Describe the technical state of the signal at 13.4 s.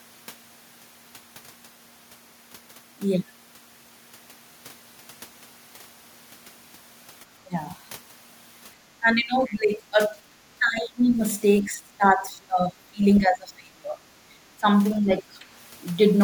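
At 13.4 s the speech sits inside a stretch of speech suppressed in double talk, from 13.2 to 14.01 s, dipping by roughly 25 dB. The likely cause is an echo canceller mistaking near-end talk that overlapped far-end audio for echo, unlike a network dropout's abrupt, complete silence.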